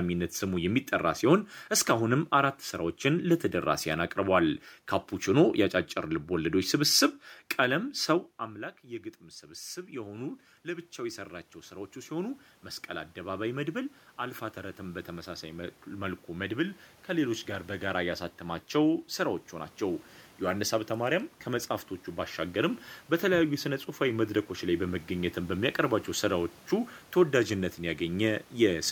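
Automatic gain rising runs from 9.4 s to 18.09 s. After the talker moved around 8 s and the input dropped by about 16 dB, the gain control slowly adds about 12 dB. The voice creeps back up, and the room noise swells alongside it.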